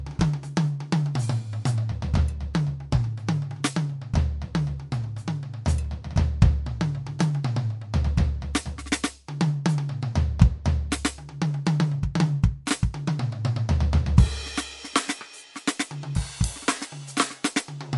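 Throughout the music the top end stops dead at 11.3 kHz, with a watery, swirling texture and metallic chirps on bright attacks, most likely from MP3 compression at a low bitrate near 54 kbps. A spectrogram shows a flat ceiling and flickering holes where weak bands drop out.

At 12.66 s a sharp attack arrives with pre-echo: quantisation noise spread across its transform block leaks about 12 ms ahead, so a short hiss precedes the hit and softens it. The waveform shows a small fuzzy smear just before the transient.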